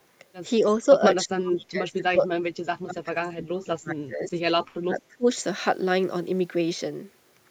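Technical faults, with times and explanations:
1.23–2.25 s, 2.41–4.33 s and 4.83–5.26 s, speech suppressed in double talk: the speech repeatedly sinks, by about 35 dB in the first two spans and about 25 dB in the last. The likely cause is an echo canceller failing to separate this side's talk from overlapping far-end echo on the loudspeaker and attenuating both.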